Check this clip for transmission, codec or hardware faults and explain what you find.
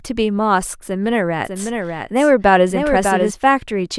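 One fault is present, a doubled audio track, from 1.45 s to 3.31 s. The likely cause is a second, slower capture path or an edit holding two copies out of step, so the same speech is mixed in twice. A full-band copy trails the original by about 0.7 s at a few dB lower, with no reverberant tail or room colouring, and it cuts in and out abruptly at those boundaries, laying a clean, distinct repeat over the speech.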